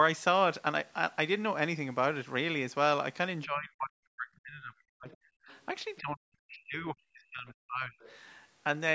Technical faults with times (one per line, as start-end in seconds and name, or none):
3.45-5.08 speech suppressed in double talk
5.11-5.17 other side's voice leaking through
5.39-5.50 speech suppressed in double talk
5.49-5.65 other side's voice leaking through
5.99-8.00 speech suppressed in double talk
8.00-8.14 other side's voice leaking through